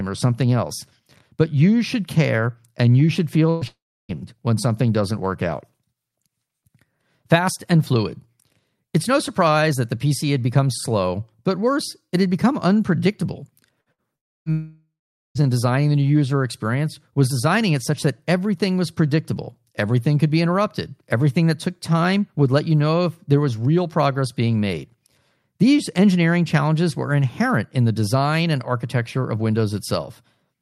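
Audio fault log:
3.49–3.64 s, burst of packet loss: about 120 ms is lost and concealed by a fading continuation of the preceding sound, a smeared, decaying band on the spectrogram before the audio resumes further on.
3.67–4.12 s, long network dropout: about 420 ms is gone, likely from a network outage. A brief fading fill gives way to roughly 320 ms of flat, near-empty waveform before "when something doesn't work".
13.81–14.01 s, burst of packet loss, twice: right after "it had become unpredictable", two losses of about 60 ms each at 13.81 s and 13.92 s. Each is bridged by a short decaying buzz or hiss, seen as repeated, fading spectral texture.
14.16–15.44 s, long network dropout, twice: a loss of about 300 ms at 14.16 s, then one of about 840 ms at 14.52 s, likely from network outages. After fading fills come about 290 ms and 440 ms of blank spectrogram, and then "in designing the new".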